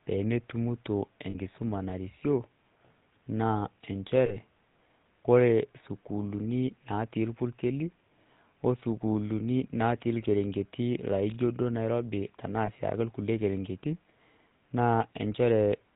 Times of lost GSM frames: 1.30-1.36, 4.26-4.36, 12.66-12.70

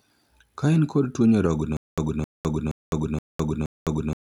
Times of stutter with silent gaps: 1.77-4.30

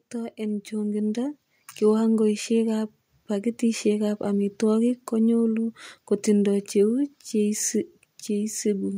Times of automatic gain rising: 0.11-2.10

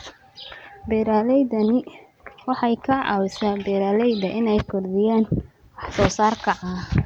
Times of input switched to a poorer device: none

